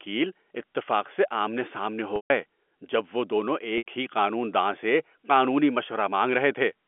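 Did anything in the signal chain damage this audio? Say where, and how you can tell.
Yes, at the network stage: packet loss with pitch repetition. At 2.16–2.30 s, before "جب وہ دونوں", the sound holds on a buzzy repeated cycle that fades. At 3.78–3.83 s, before "ہی قانون داں سے", it briefly holds again. The receiver replayed the last pitch period to cover about 140 ms and 80 ms of missing packets.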